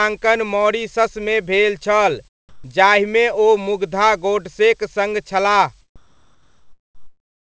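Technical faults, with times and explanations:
2.49 to 2.64 s and 5.96 s to the end, comfort noise in place of the background: in the quiet gaps, about 38 dB below the loudest speech, the room's real background gives way to a smooth, featureless hiss, about 2 dB louder in the short gap and about 3 dB quieter in the long final one. The likely cause is discontinuous transmission, where the sender stops sending during pauses and the receiver fills them with synthetic noise.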